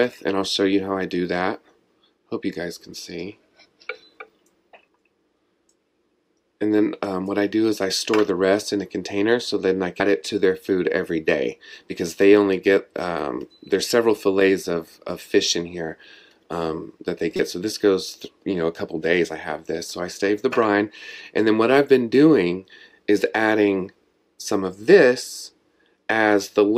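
The audio has damaged data in a compressed stream. A brief glitch is heard at 10.00 s. A second one runs from 17.36 to 17.40 s. Corrupted bytes make the decoder misread frames there. It loses sync and hunts for the next frame header.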